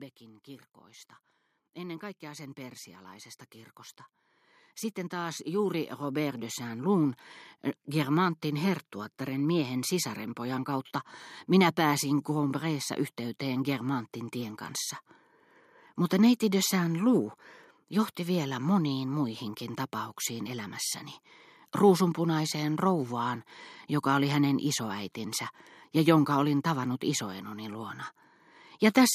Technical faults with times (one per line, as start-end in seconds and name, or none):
0.19-7.15 automatic gain rising